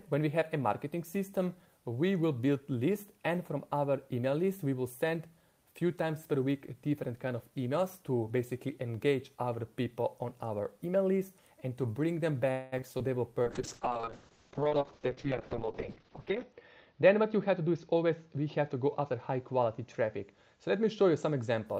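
From 12.51 to 12.74 s the sound stalls into a fading continuation for about 0.21 s, then resumes where it stopped. This is likely a call audio freeze, where delayed packets emptied the jitter buffer.

Short concealed packet loss follows at 12.78 to 12.81 s, 12.81 to 12.84 s and 12.98 to 13.02 s. Each time, 20 ms never arrived and was patched by extrapolation, heard as brief smears or wobbles.

From 13.44 to 21.72 s a call bitrate drop takes the encoder from 32 to 6 kbps and the bandwidth from 20 kHz to 6 kHz. The audio turns muffled and coarse, sitting at the lowest rate for about 3.1 s.

Within that stretch, from 15.35 to 18.38 s, a jitter buffer speed-up plays the audio at 107% speed by trimming pitch periods. About a fifth of a second is removed, so the sound hurries without a change in pitch.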